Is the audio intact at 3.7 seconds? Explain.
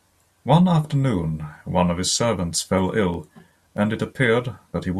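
No. The speech carries CD scratch ticks from 3.14 to 3.77 s. A blemish spoils more data than error correction can rebuild, once per disc turn. The player patches the gaps, leaving six brief ticks, the longest a couple of milliseconds.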